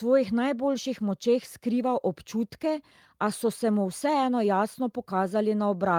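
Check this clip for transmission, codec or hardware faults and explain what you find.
No transmission, codec or hardware faults are audible anywhere in this speech recording.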